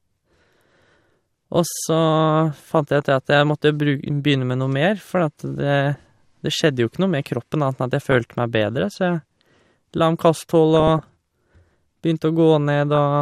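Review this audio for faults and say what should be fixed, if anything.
Burbling breaks over the speech at 3.00–3.05, 5.95–6.03, 8.01–8.21, 10.75–10.99 and 12.95–12.98 s. This is DAB burbling: bit errors of a fraction of a percent slipped past error correction, corrupting the MP2 audio data so individual sub-bands got short blips of noise. Better DAB reception, through an improved antenna or signal strength, would prevent it.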